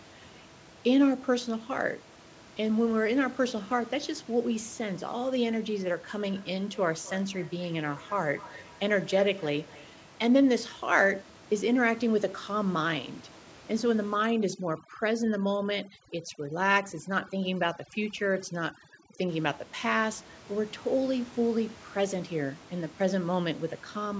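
From 6.19 to 10.5 s, feedback echo between two devices: a nearby device's playback re-enters the microphone, so the speech repeats roughly every 300 ms, about 20 dB down.

From 14.14 to 19.29 s, overdone noise removal cuts frequency bands near its noise estimate, leaving near-silent gaps with twinkling specks.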